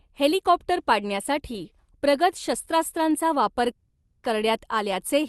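From 3.75 to 4.26 s there's a call audio freeze: the sound stretches into a fading buzz for about half a second, likely from late packets draining the jitter buffer, then carries on with nothing lost.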